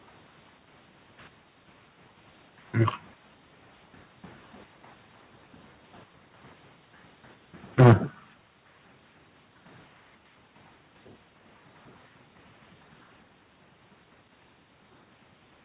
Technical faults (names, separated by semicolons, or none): microphone overload; microphone volume stepped down